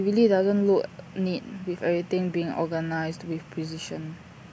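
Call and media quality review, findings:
Nothing to flag on this one; the speech comes across without any audible problems worth a ticket.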